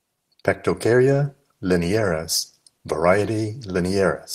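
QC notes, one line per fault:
No faults heard anywhere in this audio.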